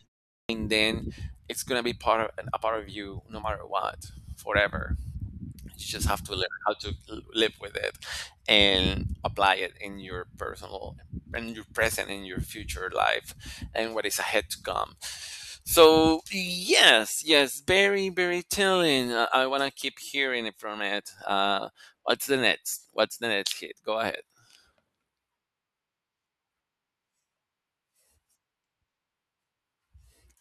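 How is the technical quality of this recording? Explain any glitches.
The recording has one glitch, at the very start. A clipped start after a pause occurs from 0.38 to 0.49 s, just before "then it's gonna be". The output device sleeps through the opening silence and needs time to wake. About 114 ms of speech is swallowed. The phrase begins abruptly, missing its first sounds.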